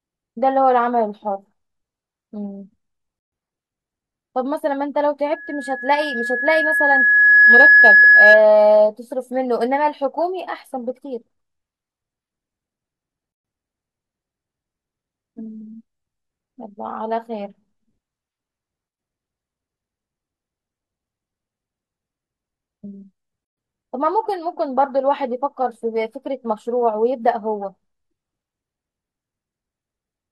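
A speech recording with two separate problems. First, there's a gap at a join of encoded pieces roughly every 10 seconds: the sound drops out at 3.19 s for about 133 ms, at 13.32 s for about 124 ms, and at 23.45 s for another 124 ms, then picks up right where it left off. The edges are smeared, which fits separately encoded chunks stitched together without trimming the encoder's start delay and end padding. Second, from 5.32 to 8.45 s there's a loudspeaker feedback squeal: a single tone at 1.7 kHz swells up over a couple of seconds until it sits around 10 dB above the speech. That's the mic hearing the speaker it drives, with the loop gain at that frequency tipping past one so it feeds itself until the amplifier limits it or the loop gets broken.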